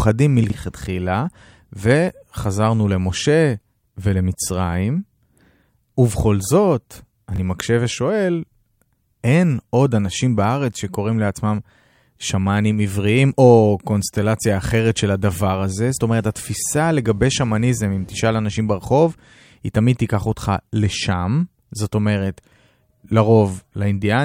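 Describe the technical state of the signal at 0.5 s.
A brief jumbled moment from 0.44 to 0.52 s: chunks out of order, with one 20 ms chunk arriving three chunks late, creating three hard joins.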